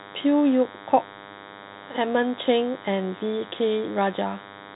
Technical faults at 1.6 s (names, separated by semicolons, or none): DECT cordless phone buzz